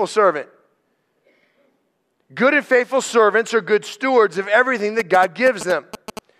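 Speech, and right after "good stewards of everything" you get GSM signalling bursts from 4.99 to 6.19 s: a galloping dit-dit pattern of short 217 Hz buzzes, around 10 dB under the voice. A nearby 2G phone's radio bursts are being rectified by the audio circuitry.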